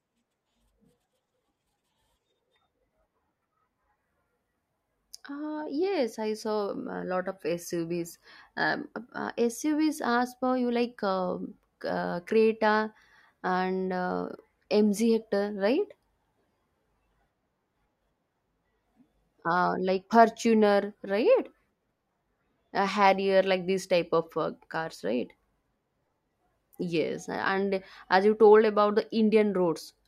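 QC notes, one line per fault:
13.49 s, dropped samples: a single sharp click cuts through the speech at this instant, far too brief to remove any audible sound. The likely cause is a handful of samples, a fraction of a millisecond's worth, going missing from the stream, so the waveform leaps straight from one value to a later one instead of moving smoothly. On a waveform view that shows as a sudden step; on a spectrogram, a thin vertical line spanning the full frequency range.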